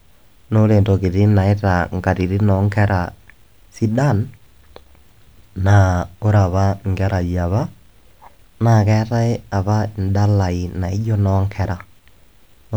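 No audible technical faults.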